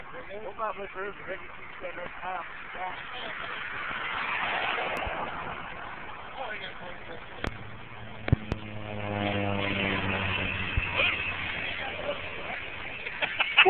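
Loud pops break through at 4.97 to 5.10 s as a quick pair, at 7.47 to 7.50 s as a single hit, at 8.33 to 8.55 s as another pair, and at 10.77 to 10.80 s alone. Each is a sharp thump standing far above the level of the audio, most likely an electrical voltage step from a plug, switch or static. Unlike a dropout, the sound carries on unbroken beneath each pop.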